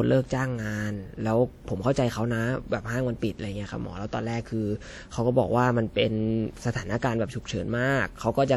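Speech throughout carries plainly audible transform-codec damage, likely from WMA compression: a ringing, washy smear and hiss that swells with the speech, consistent with a bitrate near 48 kbps. A spectrogram would show blurred, blocky patches over time, and nothing above 20.1 kHz.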